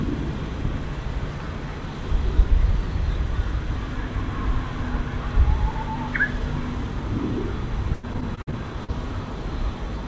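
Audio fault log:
7.94–8.90 s: repeated packet loss (robotic sound). Short dropouts, the longest about 90 ms, recur rapidly. Each is patched by extending the preceding sound, covering about a quarter of the span, so the audio turns choppy. Content stops above 8 kHz, consistent with a wideband call codec such as G.722.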